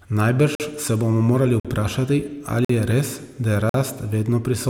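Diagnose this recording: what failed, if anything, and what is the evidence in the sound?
Gaps between chunks occur at the playback or chunk-assembly stage. The speech stops dead for about 48 ms four times: at 0.55–0.60 s, 1.60–1.65 s, 2.65–2.69 s and 3.69–3.74 s. Each hole recurs every 1.05 s, which fits 1 s blocks of audio with silence inserted at each join. The speech resumes intact after each gap, so nothing is lost, but the flow is broken at every block boundary.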